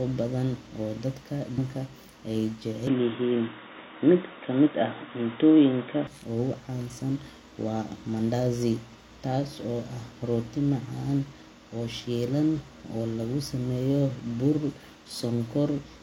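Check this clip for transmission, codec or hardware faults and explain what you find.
Two faults stand out in this speech clip, one brief stream error and one longer change in tone.

From 1.54 to 1.60 s there is damaged data in the compressed stream: corrupted bytes make the decoder misread frames and lose sync until it finds the next valid header, producing a short disturbance. Its brevity and the decoder's loss of sync separate it from a plain dropout, which would simply go silent.

From 2.87 to 6.07 s the sound turns dull and boxy, with nothing above 3.8 kHz, a level shift of around 5 dB and a faint new noise floor roughly 45 dB down. The likely cause is the input being switched to a poorer device. The change is abrupt, with no gap at the switch, and it carries its own level and noise, which a codec simply lowering its bandwidth would not introduce.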